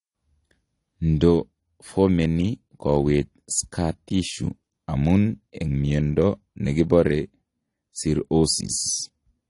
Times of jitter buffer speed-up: none

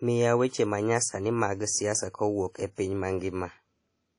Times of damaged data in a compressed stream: none

